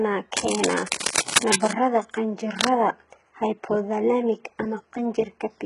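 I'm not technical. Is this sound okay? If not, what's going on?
No. The whole recording sounds heavily squashed. That is likely HE-AAC compression, which rebuilds the high tones, so s sounds turn gritty and metallic.

There is also cable scratch noise from 0.37 to 1.73 s and from 2.59 to 2.75 s. This scratchy rustling is about as loud as the speech, likely from a worn cable or connector being moved.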